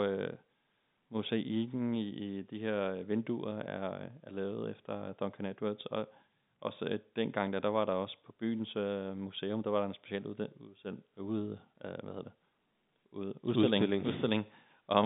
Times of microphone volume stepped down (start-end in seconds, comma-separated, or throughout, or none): none